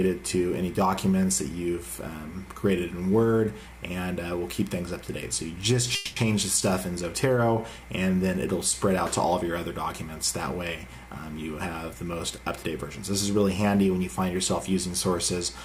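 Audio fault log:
5.95–6.19 s, call audio freeze: the sound stalls into a fading buzz or hiss continuing its last moment for about 210 ms, then resumes exactly where it left off with nothing lost, likely because delayed packets let the jitter buffer run dry, inserting a gap.
11.93–12.91 s, jitter buffer speed-up: the audio briefly runs about 5% fast and feels slightly hurried while pitch stays unchanged, as the receiver trimmed short pitch-period slices totalling roughly 50 ms to shrink an overfilled jitter buffer.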